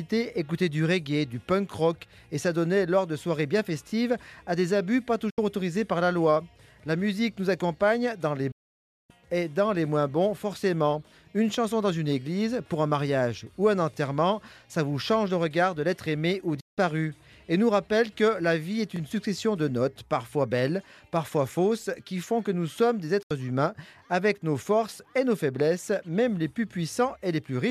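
A short stutter, a tiny slice of sound heard twice, hits at 3.89 s, and the same hiccup returns at 13.94, 18.96 and 23.99 s. These are overlapping chunks: the audio was handled in 5.0 s blocks, and each block restarted about 23 ms before the previous one finished, so that sliver replays at the join.

Between those stutters the sound drops out abruptly, fading to silence in about 8 ms, at 5.30 to 5.39 s (72 ms), 8.51 to 9.10 s (552 ms), 16.60 to 16.78 s (168 ms) and 23.22 to 23.31 s (72 ms). This is digital broadcast dropout. The receiver lost valid frames and muted until clean data resumed, so whatever was transmitted during each gap is simply missing.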